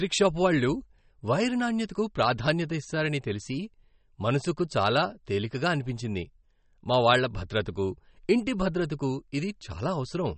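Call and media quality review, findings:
Speech throughout the clip sounds watery and swirly, with dull treble and nothing above 8.3 kHz. Likely MP3 compression: starved of bits, so the encoder lops the top and drops weak bands frame to frame. Fits roughly 34 kbps.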